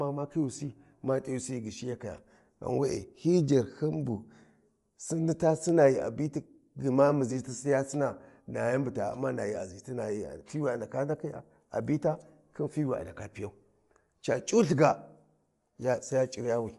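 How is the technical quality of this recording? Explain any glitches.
The technical quality is held back by one fault that runs through the whole clip. Bluetooth LC3 compression is the likely cause. The speech has a breathy, grainy edge, and the codec damage is plainly audible. Nothing is present above about 11.5 kHz. LC3 codes audio in short transform frames, here consistent with 10 ms. At a rate that fits a 48 kbps stream, it discards much of the upper spectrum and fills the gaps with shaped noise. That substitution produces the grit on the voice and the dull top end.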